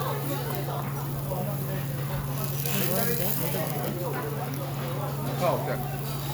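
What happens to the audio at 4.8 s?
At 4.8 s the audio plays through intact, with no dropout, click, distortion or other fault at that moment.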